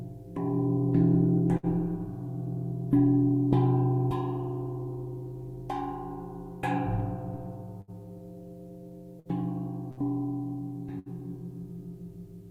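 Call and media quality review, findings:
Burst of packet loss at 1.57–1.66, 7.81–7.91, 9.20–9.28, 9.91–10.00 and 10.99–11.09 s. Network path, receiver concealment: 55–66 ms gaps filled by extending the last sound as fading buzz or hiss, then playback resumes with about 60 ms of audio missing each time.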